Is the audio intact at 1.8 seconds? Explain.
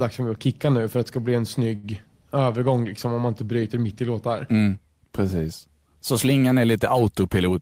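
No. A short stall from a late packet runs from about 1.75 to 1.86 s. The next packet of speech was late, the jitter buffer ran dry, and the receiver filled the gap by holding the last sound for about 78 ms. When the packet arrived, playback resumed where it had stopped, so nothing is lost, but everything after runs 78 ms later. You hear a sound held unnaturally long, with a slight buzz or dip.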